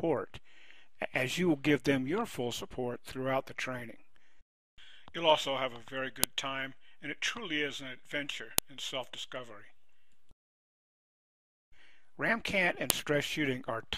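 Separate WAV pieces were joined without stripping their headers, so each new piece begins with a few dozen bytes of file header that the player treats as samples. That is the file header played as audio, and it happens at 6.24, 8.58 and 12.90 seconds. Each time those bytes come out as a sharp, loud click or snap, cutting in regardless of what the surrounding sound is doing and marking where one piece ends and the next begins.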